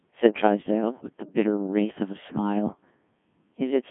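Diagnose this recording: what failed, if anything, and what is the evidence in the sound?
Codec 2 vocoder throughout (codec stage): buzzy, robotic speech, 150 Hz to 3.5 kHz, resynthesised from pitch and envelope, fitting a 1.6 kbit/s mode.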